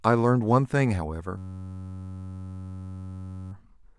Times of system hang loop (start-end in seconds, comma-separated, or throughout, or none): 1.38-3.52